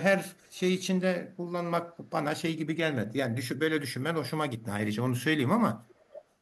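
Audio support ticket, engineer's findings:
Echo leak, 0.34–0.61 s and 5.77–6.22 s. A delayed copy of the speech returns about 0.46 s and 0.47 s late. The first is faint, around 35 dB down, and the second is louder, around 20 dB down. Likely cause is far-end loudspeaker pickup that its echo canceller did not fully remove, sent back down the line.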